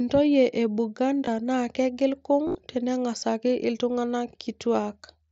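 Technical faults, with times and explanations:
1.26 s and 2.46 to 2.55 s, concealed Bluetooth headset packet loss: headset packets were dropped, and the phone filled each gap with the best-matching recent waveform. At 1.26 s, 15 ms was lost; 75 ms lost across 90 ms, runs reaching 30 ms, gives a buzzy held tone and a warble as real sound returns.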